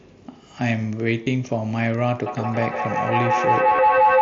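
Speech carried over a Bluetooth headset link, where the mSBC codec keeps the sound to roughly 8 kHz with a faint graininess on louder moments, shows two kinds of fault. Concealed Bluetooth headset packet loss occurs at 1.24–1.27 s and again at 3.76–3.79 s. Each is a 22.5 ms stretch that the receiver filled by repeating the best-matching recent waveform, which fits three lost frames. The result is a brief buzzy hold with a slight warble as real audio resumes, rather than the silent gap or click of unconcealed dropouts. From 2.26 s to the end, a feedback howl builds. The tone sits near 1 kHz, the loop repeats roughly every 150 ms, and the howl peaks about 6 dB above the speech. Two devices sharing the call in one room form a loop that gains on each pass. It grows louder and narrower instead of decaying like an echo.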